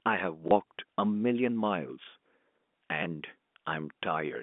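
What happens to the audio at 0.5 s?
At 0.48 to 0.51 s, packet loss with the last packet repeated: about 30 ms goes missing and the previous chunk replays, giving a small blip rather than the silent gap a plain dropout leaves.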